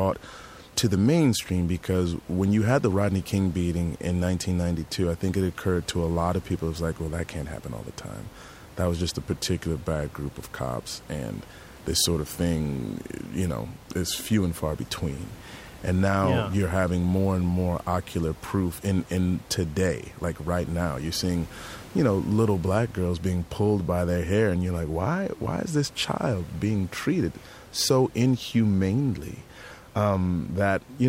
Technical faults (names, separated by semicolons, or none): none